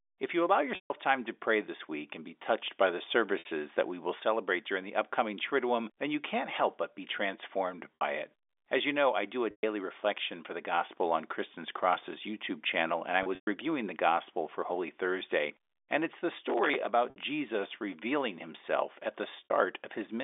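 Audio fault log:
0.75–0.90 s, 3.39–3.45 s, 7.96–8.01 s, 9.51–9.63 s, 13.23–13.47 s, 17.10–17.16 s, 19.44–19.50 s, packet loss with pitch repetition: the network dropped stretches of the stream, roughly 30 ms per packet by the sound of it, and the receiver filled each hole by looping the last pitch period while fading it over about 50 ms. The 60 ms gaps at 3.39, 7.96, 17.10 and 19.44 s come out as a briefly held, buzzy tone. The longer losses fade to silence before speech returns through a short cross-fade: 150 ms at 0.75 s, 120 ms at 9.51 s, and 150 ms at 13.23 s, which is scattered across 240 ms with a longest run of 120 ms.
16.50–16.87 s, processor overload crackle: the processor fell behind and missed around twenty deadlines for small buffers of roughly 5 ms each. At every miss, a stale buffer of old audio was replayed, leaving abrupt hard edges. These edges pile up into a gritty, tearing crackle laid over the telephone-band speech for about 0.4 s. 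The crackle stops as soon as the load clears and buffers are again delivered on time.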